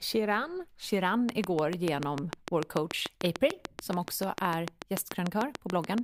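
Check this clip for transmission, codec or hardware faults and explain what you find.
One fault is present: a train of clicks running from 1.29 s to 5.99 s. About thirty sharp, near-identical pulses arrive at a regular 6.8 per second, standing well above the speech and ticking through the pauses as well. The likely cause is electrical interference or a struggling interface injecting a pulse at a fixed rate. The steady spacing and matching shape set it apart from random crackle or isolated pops from dropouts.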